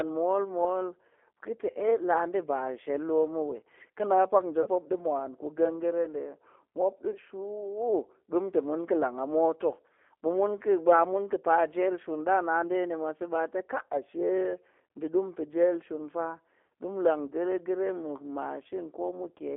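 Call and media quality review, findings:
G.729 codec, whole call. Speech band-limited to roughly 300 Hz to 3.4 kHz, nothing above. Plainly audible coding damage: rough, slightly synthetic timbre. Probable component: the narrowband speech codec, consistent with an 8 kbit/s G.729A stream. Mechanism: each 10 ms frame is rebuilt from a vocal tract filter, a pitch predictor and a few coded pulses, so fine waveform detail is lost.

VoIP packet loss concealed by the speech codec, three events. Short stretched, fading smear, then weak, distorted recovery. At 4.62 to 4.69 s, 7.11 to 7.18 s and 16.66 to 16.70 s. About 40 ms lost each time, which fits two consecutive lost packets. Probable component: network path, jitter buffer and decoder concealment. Mechanism: decoder extends last pitch and filter with falling gain. Frames depend on prior state, so recovery lags.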